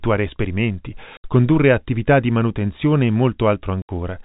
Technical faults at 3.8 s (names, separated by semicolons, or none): packet loss filled with silence